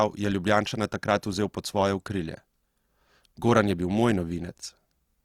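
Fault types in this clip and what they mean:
Opus compression: Plainly audible, grainy roughness runs through the whole speech clip, likely from Opus in its CELT mode at a rate that fits about 24 kbps. A spectrogram keeps fullband coverage with few holes, but upper bands look noise-filled rather than cleanly harmonic.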